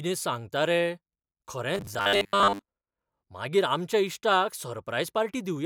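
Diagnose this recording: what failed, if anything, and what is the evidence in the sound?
Between 1.75 and 2.64 s the speech turns into robotic sound from repeated short buffers, a stiff metallic buzz pitched at 100 Hz that roughly tracks the syllables. The stage is the driver or buffer, and the likely cause is audio arriving too seldom, so a 10 ms block is replayed in place of most of the real signal. On a spectrogram this shows as a rigid comb of flat harmonics at 100 Hz spacing. The waveform shows a roughly similar 10 ms shape repeating.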